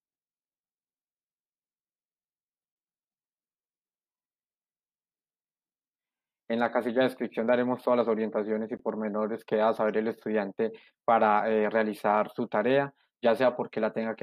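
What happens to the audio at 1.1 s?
Nothing goes wrong at 1.1 s; the audio plays through that moment intact, with no dropout, click or other fault.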